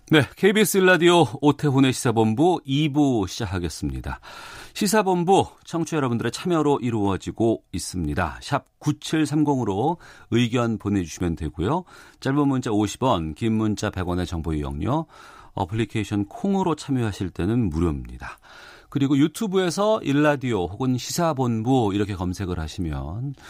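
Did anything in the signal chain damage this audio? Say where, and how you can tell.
No signal-chain damage heard.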